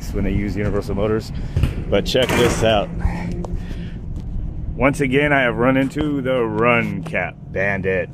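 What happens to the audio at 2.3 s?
Nothing goes wrong at 2.3 s; the audio plays through that moment intact, with no dropout, click or distortion.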